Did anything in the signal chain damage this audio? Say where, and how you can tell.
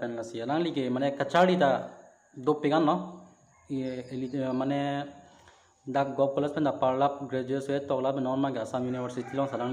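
No, nothing stood out on listening that would point to damage at any stage of the signal chain.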